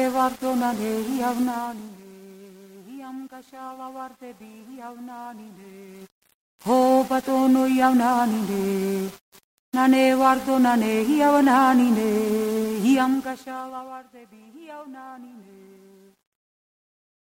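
Zipper noise shows up three times: a drop from 1.39 to 2.04 s, a rise from 5.85 to 6.41 s, and a bigger drop from 12.91 to 14.03 s. The gain jumps in unsmoothed 2 dB steps, ten-odd a second, so every step ticks as the level slides.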